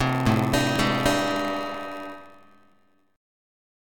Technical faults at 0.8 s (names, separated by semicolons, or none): block size mismatch (padded); audio missing between chunks